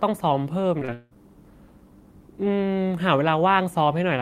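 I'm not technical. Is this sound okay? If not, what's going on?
No. From 0.79 to 1.18 s, repeated packet loss (robotic sound): four pieces dropped out and got patched with stretched sound. Speech turns choppy and robotic.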